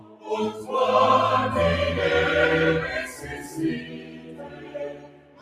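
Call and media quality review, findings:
Noise suppressor applied to music or sounds, whole clip. Level keeps swinging, around 20 dB between loudest and most ducked stretches. Speech-tuned suppressor left in the chain, reading sustained tones and decays as noise. Transients survive while held material and tails get pulled down, so it pumps and thins. Worth bypassing the NS stage for non-speech content.

Sound cut by the noise suppressor, three spots. 0.0–0.29 s: opening dips about 11 dB. 3.11–3.57 s: dips about 7 dB. 3.8 s to the end: longest stretch, about 11 dB down at worst, and tails get clipped short. Same suppressor gain decisions each time, treating steady or fading sound as noise.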